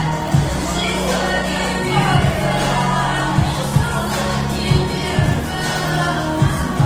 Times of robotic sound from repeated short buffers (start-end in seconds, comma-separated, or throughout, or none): none